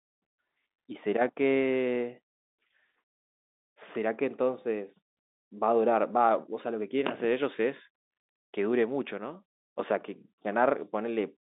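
No faults are audible across the speech, which sits in a telephone band of roughly 250 Hz to 3.7 kHz consistent with G.711 mu-law coding.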